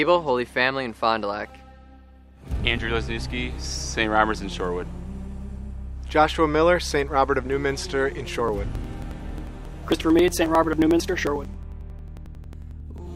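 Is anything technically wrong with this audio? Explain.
Yes. From 8.39 to 13.07 s, periodic USB or driver dropouts: something stalls the audio path every 0.09 s, skipping around 10 ms each time, heard as regular ticks while sound plays.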